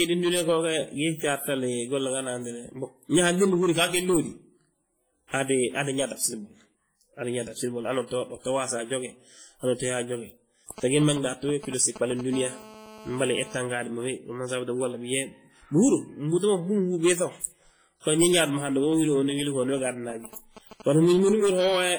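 Speech runs through the whole clip with a ringing, washy quality and a hiss that rises and falls with the voice, heavy damage that points to a low bitrate around 24 kbps and is likely WMA compression, where long transform blocks smear quantisation noise over tens of milliseconds and zero out weaker detail. At 5.28 to 5.33 s a short hiss leads into an attack that sounds softened. This is pre-echo, with noise from the transform block spreading about 50 ms ahead of the sharp onset into the quiet before it. From 10.71 to 12.21 s, and again from 18.45 to 21.29 s, a galloping dit-dit-dit of short 217 Hz buzzes cuts in, roughly 10 dB and then roughly 15 dB below the speech. These are GSM signalling bursts: a nearby 2G phone's radio bursts, sent while it signals, are rectified by the audio circuit. Between them, from 12.33 to 13.57 s, ending just before "gaadi ma", a hard, raspy, steady 217 Hz buzz rich in harmonics sits about 19 dB under the speech. 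This is GSM phone buzz from a nearby 2G phone transmitting in bursts 217 times a second during a call.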